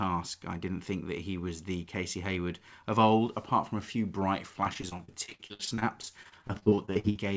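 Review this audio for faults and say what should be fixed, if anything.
From 4.64 s to 7.17 s, just after "from a few bright", there is repeated packet loss (robotic sound). Close to thirty short holes, the longest about 57 ms, are patched by stretching the preceding sound. Roughly 28% of the stretch is concealed, and about 720 ms of audio is lost outright, so the speech turns choppy and robotic. On a spectrogram, already empty above 8 kHz as a wideband call codec would leave it, the harmonics smear into flat, frozen streaks broken by notches. A waveform shows copied cycles and brief collapses. A deeper jitter buffer, forward error correction or a steadier network route would keep these losses from recurring.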